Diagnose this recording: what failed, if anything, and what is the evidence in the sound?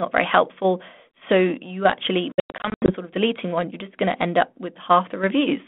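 Network packet loss on an ADPCM call, 2.32 to 2.92 s, between "you actually" and "sort of deleting one". About 340 ms of sound is lost across 560 ms in gaps up to 100 ms, roughly fifteen packets. On a spectrogram these appear as hard-edged silent columns. Silence replaces each gap, so the decoder's predictor and step size fall out of step with the sender's and mistrack as sound resumes.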